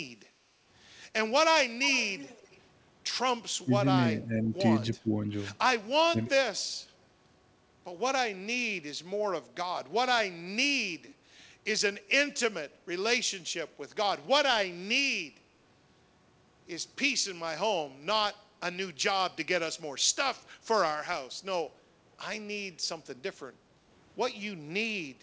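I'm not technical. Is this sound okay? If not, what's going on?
No. Echo leak, from 1.88 to 2.6 s and again briefly at 11.07 to 11.15 s: a faint, delayed copy of the speech comes back about 0.3 s late. This is likely a loudspeaker on the other end whose echo cancelling let some of the sound slip back.

Speech suppressed in double talk, at 3.59 to 3.88 s, 4.14 to 4.51 s, 5.03 to 5.33 s and 6.06 to 6.32 s: the speech briefly drops, sharply at the first and last, more gently in between. Likely cause: both sides talking at once, so the echo canceller turned everything down.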